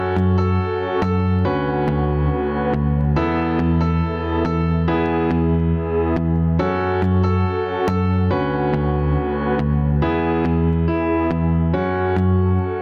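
From start to finish there's gain pumping on this one. The level keeps swinging by around 10 dB. The likely cause is input gain set way too hot for the mic, with a fast limiter or compressor clamping down on every peak. That's why loud and soft passages sit so close together and everything comes across squashed.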